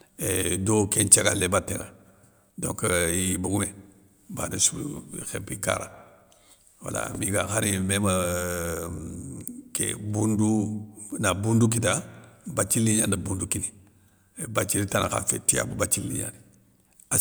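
No technical faults can be heard in the recording.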